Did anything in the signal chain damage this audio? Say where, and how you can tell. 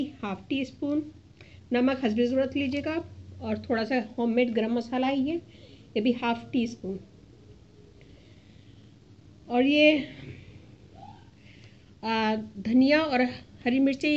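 No, nothing along the signal chain has left an audible mark on this audio; at every stage it holds together as a continuous, intact signal with no point where the chain can be heard intervening.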